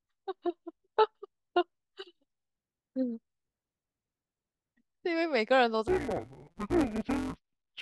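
From 5.88 s to the end at 7.81 s, the speech turns dull and robotic with a buzz at about 172 Hz. That's interleaved audio read as planar: each 5.8 ms block of alternating left-right samples got split in half instead, so short blocks like these smear rather than drop an octave.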